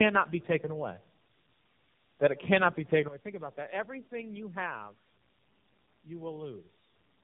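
Tandem speech coding runs throughout this speech clip. The sound points to two low-rate speech codecs in a row, roughly G.729A at 8 kbit/s then AMR-NB at 7.4 kbit/s, bridged by G.711 A-law. The second coder re-encodes the first's degraded output, compounding roughness, muffling and warble, with nothing above 3.6 kHz.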